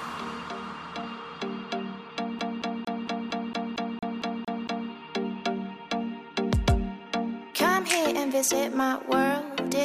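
From 2.39 s to 4.90 s the audio sticks like a CD stuck on one turn. A scratch keeps knocking the laser back a track, so the same 0.23 s slice plays 11 times, each jump marked by a brief mute, a fast, even, mechanical stutter rather than a single dropout.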